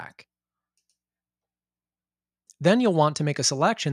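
No faults can be heard anywhere in this audio.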